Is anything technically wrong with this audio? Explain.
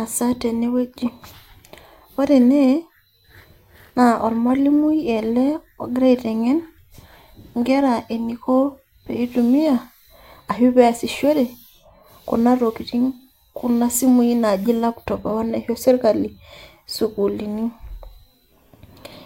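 Yes. From 0.43 s to 19.19 s, faint regular ticks run through the speech at roughly 0.4-second intervals, around fifty in all. These are clock slip clicks. Two unsynchronised clocks likely drift apart by roughly 50 ppm, so a single sample gets dropped or repeated at each slip.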